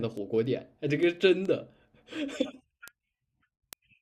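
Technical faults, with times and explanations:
0.17 to 4.01 s, word clock ticks: a train of short, sharp ticks runs through the speech at a steady rate, about one every 0.15 s, roughly thirty in all. Their strength is uneven. The receiving device is running on its own clock, not locked to the sender's, and drifting by something like 150 parts per million. Each time the two clocks slip past each other, a sample is dropped or repeated and its neighbours are misread. That leaves a tiny step in the waveform, heard as a tick.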